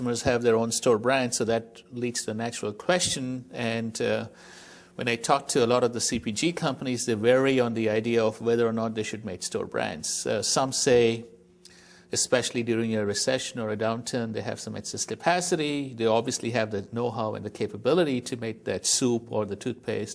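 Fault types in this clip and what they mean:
No audible faults detected.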